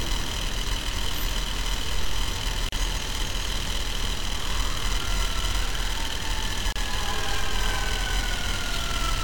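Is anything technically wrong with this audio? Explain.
Yes. There are gaps at joins of encoded pieces at 2.69–2.72 s (about 37 ms) and 6.72–6.76 s (about 32 ms), four seconds apart. Separately encoded segments were joined untrimmed, so encoder delay and last-frame padding remain. Continuous sound drops into brief silence with smeared edges, then resumes where it stopped.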